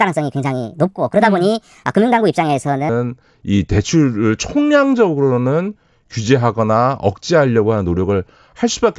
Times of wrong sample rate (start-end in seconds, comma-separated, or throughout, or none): 0.00-2.89